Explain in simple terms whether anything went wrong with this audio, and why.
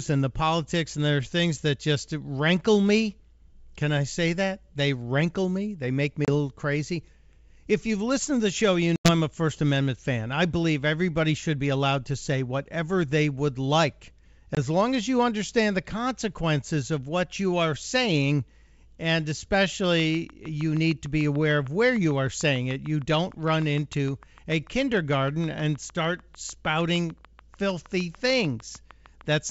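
Yes, two things went wrong. First, packet loss on an ADPCM call: pieces of the transmitted audio never arrived and were filled with silence. This coding works by predicting each sample from the previous ones, so after a gap the receiving end's predictions no longer match the sender's. You hear abrupt holes at 6.25 s (about 30 ms), 8.96 s (about 90 ms, the longest, roughly ten packets' worth) and 14.55 s (about 20 ms). After each one, the speech comes back briefly with some roughness before settling.

Second, a train of clicks runs from 19.84 s to 29.38 s. Something keeps injecting a short pulse, likely electrical interference or a faulty connection. The pulses arrive at a steady pace of about 6.6 per second, around seventy in all, and each sounds much the same. They stand out somewhat above the speech as a regular ticking that continues through the pauses. Underneath all of this, the wideband telephone coding, G.722, comes through clearly.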